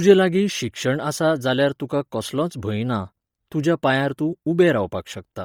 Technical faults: Bluetooth LC3 compression

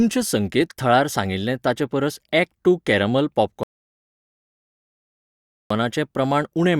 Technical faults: rebuffering stall

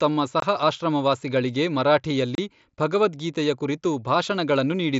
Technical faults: unconcealed Bluetooth headset packet loss

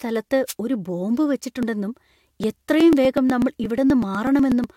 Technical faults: wireless microphone noise hit; overlap between stream segments; periodic USB or driver dropouts

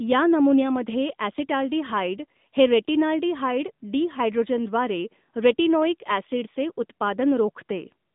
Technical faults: AMR narrowband mobile codec

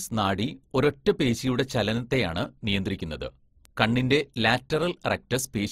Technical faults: transcoding between lossy codecs; bit error spike

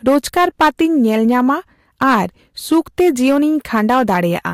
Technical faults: hard clipping

